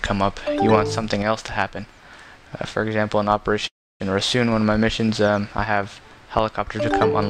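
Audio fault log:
3.67 to 4.02 s, call audio freeze: packets were likely held up in transit long enough for the jitter buffer to run dry, so the receiver carried the last sound on briefly before it died away into about 290 ms of silence. When delivery resumed, the audio picked up exactly where it had stopped, with nothing lost. A gap of roughly a third of a second was inserted, and everything afterwards plays later by the same 327 ms.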